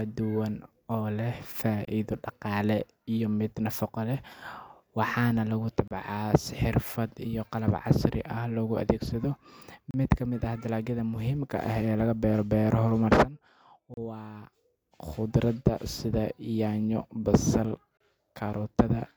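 Speech cut by short silences every 4 s: 25 ms at 1.85–1.88 s, then 32 ms at 5.88–5.91, 9.91–9.94, 13.94–13.97 and 17.97–18.00 s. These are gaps at joins of encoded pieces, where leftover encoder start delay and last-frame padding sit between separately encoded sections.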